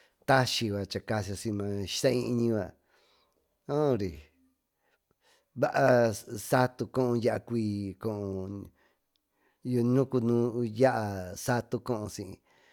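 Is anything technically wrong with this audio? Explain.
No, the signal shows no technical faults anywhere in the recording.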